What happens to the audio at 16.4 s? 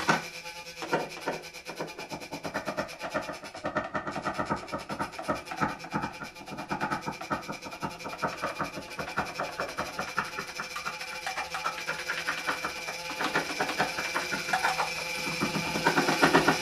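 Nothing goes wrong at 16.4 s; the sound plays through that moment intact, with no dropout, click or other fault.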